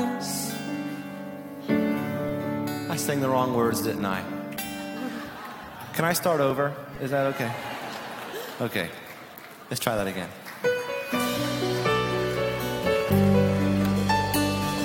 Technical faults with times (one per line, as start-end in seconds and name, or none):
6.50 overlap between stream segments
6.95 DC step